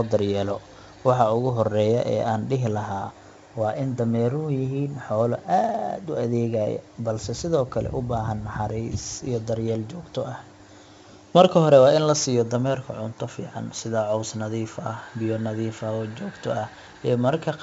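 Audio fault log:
Throughout: 4-bit ADPCM compression. Gritty hiss rides every loud stretch of speech, sharp onsets distort, and nothing sounds above 7.7 kHz. Each sample becomes a coarse 4-bit step from a prediction, so the error follows the level. The cutoff fits a 16 kHz rate.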